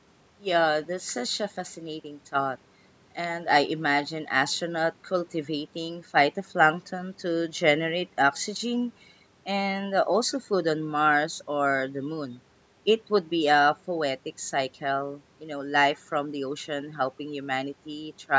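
No technical faults are audible anywhere in this speech.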